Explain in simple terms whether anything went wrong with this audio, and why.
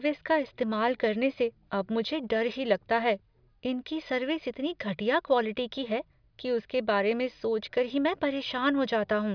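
Nothing went wrong here; the speech comes through steadily with no dropouts, glitches or odd sounds anywhere along the way.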